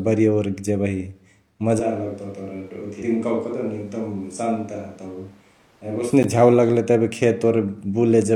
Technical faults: switch to a distant microphone; damaged data in a compressed stream; block of digital silence

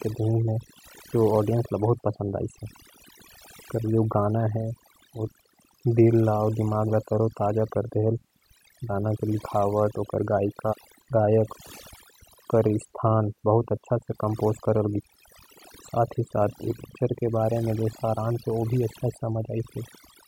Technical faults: overdone noise removal

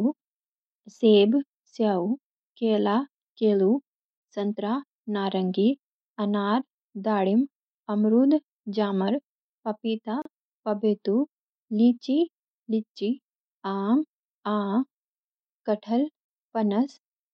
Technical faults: gap at a join of encoded pieces

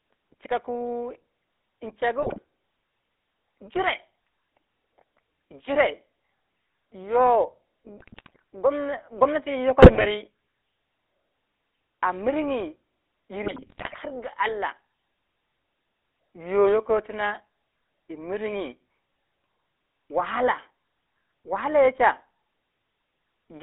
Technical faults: GSM full-rate codec; GSM bit errors

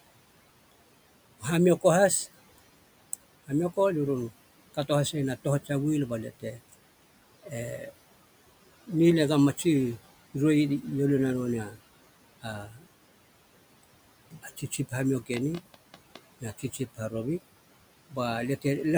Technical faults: noise suppressor artifacts; speech cut by the noise suppressor; train of clicks

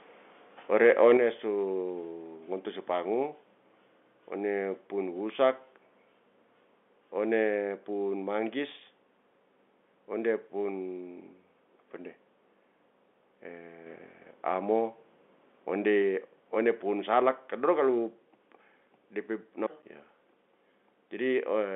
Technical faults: microphone overload; microphone volume stepped down; microphone volume stepped up

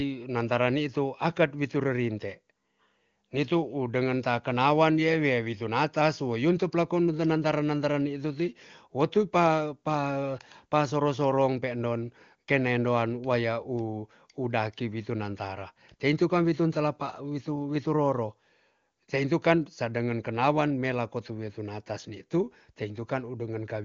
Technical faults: none

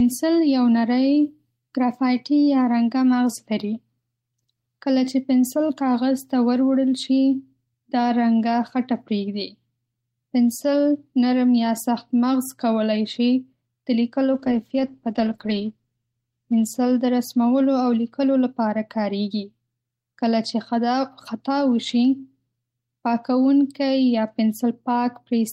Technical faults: call bitrate drop

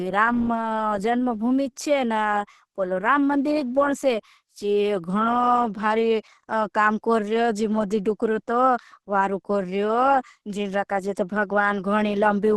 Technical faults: Opus compression

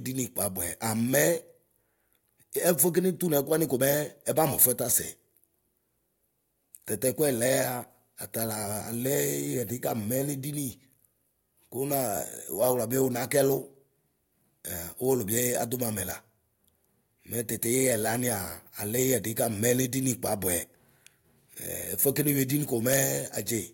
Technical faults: none

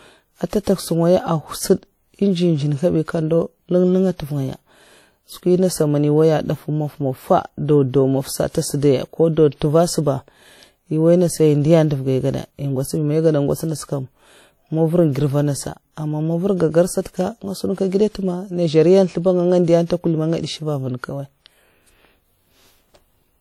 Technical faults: WMA compression; pre-echo

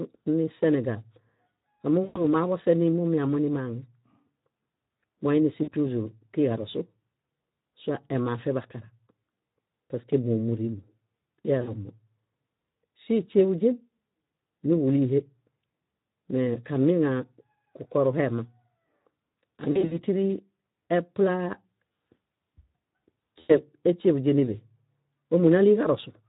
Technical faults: Speex codec; VoIP packet loss concealed by the speech codec

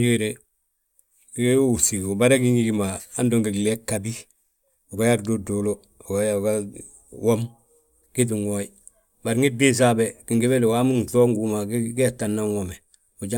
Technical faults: none

